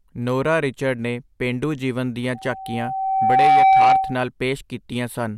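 After "ਨੇ ਪੇਂਡੂ ਜੀਵਨ ਦੀਆਂ", at 2.34 s, loudspeaker feedback squeal starts. A 768 Hz tone swells over about a second, reaching roughly 10 dB above the speech, until 4.28 s.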